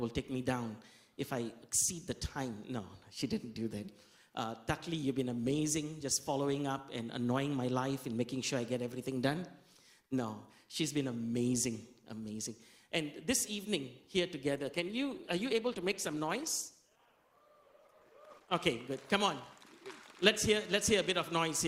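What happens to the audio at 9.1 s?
Nothing goes wrong at 9.1 s: the audio runs through that moment intact, with no dropout, click, glitch or other fault.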